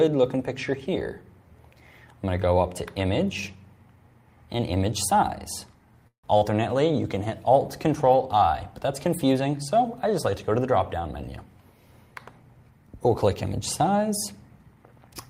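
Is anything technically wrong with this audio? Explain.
Yes, there are two faults. A call audio freeze runs from 6.07 to 6.26 s. Packets were likely delayed and the jitter buffer emptied. The last sound stretches, fades, then goes silent for about 110 ms. The audio then resumes, 161 ms later than before.

Short concealed packet loss follows at 6.38 to 6.44 s. About 40 ms never arrived. The receiver extended the preceding sound to cover it, giving a brief smear.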